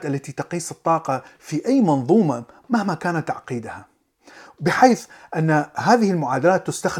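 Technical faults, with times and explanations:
4.67–5.05 s, CD scratch ticks: three short ticks in quick succession, the longest lasting just under a millisecond, spaced at roughly five to six per second. A blemish on the disc surface corrupts more data than the error correction can rebuild, and it passes under the laser once per revolution. Each pass leaves a brief gap that the player fills by interpolating or muting, so the speech carries a regular, mechanical click at the rotation rate.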